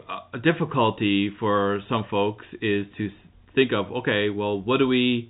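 No technical faults are audible in this speech.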